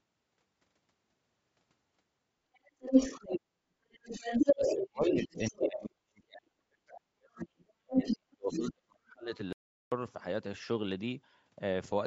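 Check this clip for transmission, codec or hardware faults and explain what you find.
Three faults are audible in this speech, all tied to the call path.

Other side's voice leaking through: a second voice appears from 2.54 to 3.41 s, 3.91 to 5.68 s, 7.36 to 8.15 s and 8.52 to 8.72 s. The likely cause is the far end playing on a loudspeaker, with the echo canceller leaving part of it in the microphone signal. In the first three stretches the echo sits a little louder than the talker. In the last it is a little quieter.

Speech suppressed in double talk: the talker dips briefly from 3.98 to 4.03 s, quite sharply. A much longer and deeper loss runs from 4.54 to 9.34 s, adding up to around four seconds of weakened or broken speech. This overlaps the leakage, so both sides seem to be talking at once. The canceller likely could not tell the talker from the echo and turned everything down.

Audio dropout to silence: from 9.53 to 9.92 s the sound stops dead for about 392 ms. 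The gap is silent with no room tone. Input was likely lost while the recording kept writing silence. Whatever was said in that gap is gone. The band ends at 8 kHz, which fits ordinary call processing.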